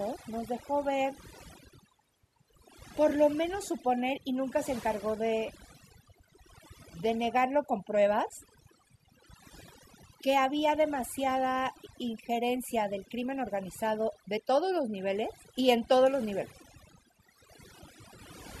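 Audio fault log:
Throughout, overdone noise removal: the denoiser's been pushed way too hard, so it keeps clamping individual frequency bands down whenever they sit near its noise estimate. The background drops and breaks up into little twinkly specks, and the quieter bits of speech get chewed away.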